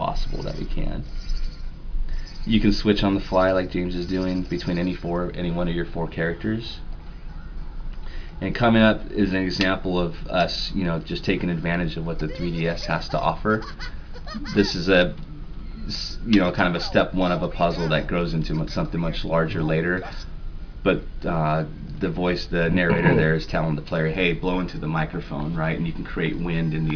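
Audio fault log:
No faults detected.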